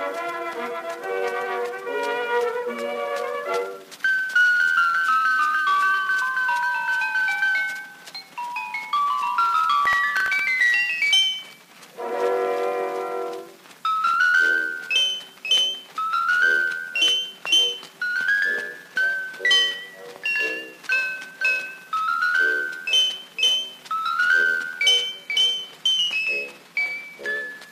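From 9.86 to 10.60 s the audio breaks into a short burst of gritty crackle, a processor overload crackle. The system missed its deadline for about ten audio buffers, and each time a stale fragment of old audio was replayed with hard edges. The pattern points to very small buffers of roughly a millisecond and a half. On a waveform the stretch shows a series of tiny discontinuities and repeated slivers. On a spectrogram it appears as thin vertical broadband streaks across that interval, and it stops once the load passes. From 25.12 s to the end, the adaptive stream switches to a lower bitrate with no gap, and the sound turns duller and more synthetic. The change fits a step down from AAC-LC at 96 kbit/s to HE-AAC at 24 kbit/s, which rebuilds the treble from spectral band replication rather than coding it directly. A spectrogram shows an abrupt change in the upper band at 25.12 s, with nothing above 14.9 kHz and patchy, smeared texture in the replicated high frequencies, while the waveform stays continuous.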